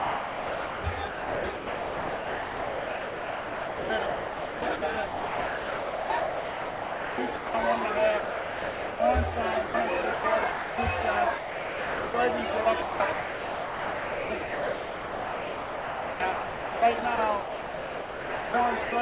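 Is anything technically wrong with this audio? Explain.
Yes. The sound is chopped by the voice detector from 0.0 to 7.54 s, at 10.02 to 10.24 s, and from 12.64 to 18.54 s. The sender's detector likely kept toggling transmission, replacing most of those stretches with comfort noise. On a waveform, bursts alternate with flat noise blocks. A spectrogram shows detail cutting in and out.

The sound is also dropped by the voice detector at 8.2 to 9.0 s, 9.66 to 9.74 s, 10.52 to 10.78 s, 11.38 to 12.14 s and 18.84 to 18.92 s. Here the detector likely mistook the sound for background and stopped sending, so it gives way entirely to steady comfort noise before returning. These show as uniform low-level noise gaps, up to 0.8 s long, with no structure on a spectrogram.

Throughout, nothing appears above 4 kHz, which fits a narrowband call codec.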